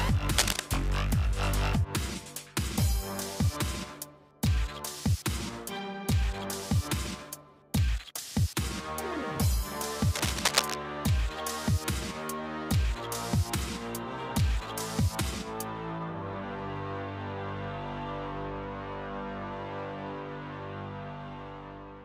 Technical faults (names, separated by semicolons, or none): cable scratch noise